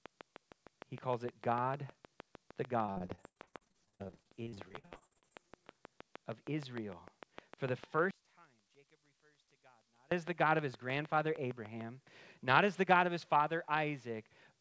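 From 0.06 s to 11.82 s a train of clicks runs under the speech, ending just before "not as the". Sharp, near-identical ticks arrive at a steady 6.55 per second, around seventy in all, peaking well above the speech and audible in the pauses too. That even, machine-like spacing, independent of the talking, sets it apart from random crackle or lip noise and points to interference or an interface fault.

Between 2.86 s and 5.47 s the speech turns choppy with repeated packet loss. Dozens of short gaps, the longest 69 ms, are each patched by stretching the last bit of sound, so about 41 percent of that stretch is concealment rather than real audio. Unlike the clicks, nothing is added on top. The speech itself breaks into robotic fragments with pieces missing.

From 8.11 s to 10.12 s the speech almost disappears, falling by about 32 dB, leaving only a faint residue. This is one channel inverted, most likely heard through a mono sum, where the two nearly identical channels cancel each other. 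A dropout would leave true silence, but here a faint trace remains. Throughout, the sound passes through G.722 call coding, with nothing above 8 kHz.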